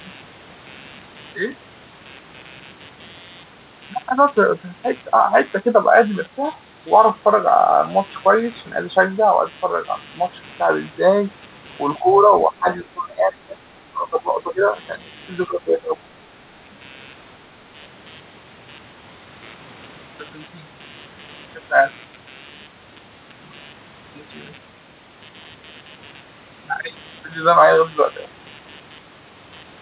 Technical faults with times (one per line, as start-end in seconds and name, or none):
0.00-29.81 computer activity noise
11.98-13.60 speech suppressed in double talk
13.90-14.77 speech suppressed in double talk
15.47-16.09 speech suppressed in double talk